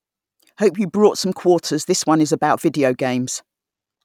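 Speech recording with no audible technical faults.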